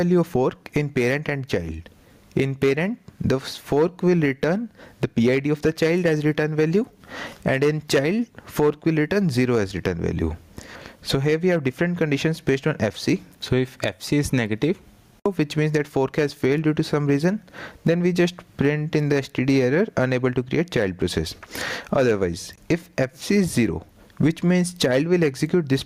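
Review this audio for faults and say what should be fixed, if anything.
Gain pumping runs throughout: the gain swings by around 20 dB, squashing loud and soft parts together. The likely cause is input gain set far too high, with a fast limiter clamping each peak. To prevent it, lower the microphone gain so peaks sit well below the limiter threshold, and use slower limiter settings.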